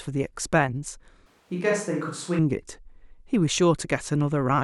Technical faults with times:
1.26-2.39 switch to a distant microphone

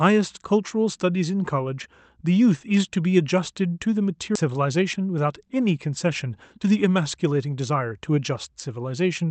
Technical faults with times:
4.35 skip ahead
4.93-5.26 jitter buffer speed-up

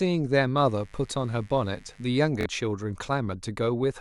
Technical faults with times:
0.58-2.08 mains buzz
2.41-2.46 Bluetooth stutter

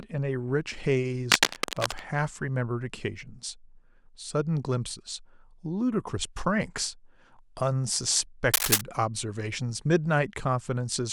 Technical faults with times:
1.31-2.00 cable scratch noise
8.54-8.81 cable scratch noise

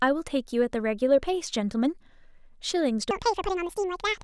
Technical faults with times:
3.11-4.24 section at the wrong speed

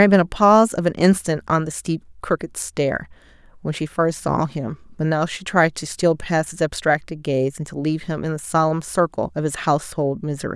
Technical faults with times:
none

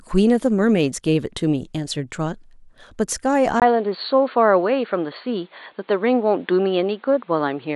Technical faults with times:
3.60-7.75 input switched to a poorer device

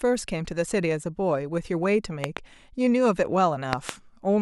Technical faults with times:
2.24-2.39 loud pop
3.73-3.91 loud pop

